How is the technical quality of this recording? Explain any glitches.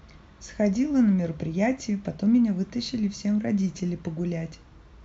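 The technical quality of the recording is sound, with no glitches to explain.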